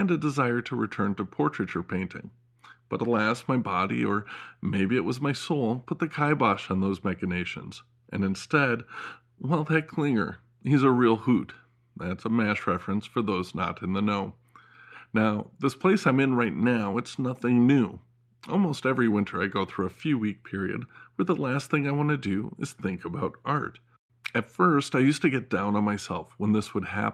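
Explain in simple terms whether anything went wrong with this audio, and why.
Nothing went wrong here: I hear no dropouts, glitches, distortion or other technical faults anywhere in this speech recording.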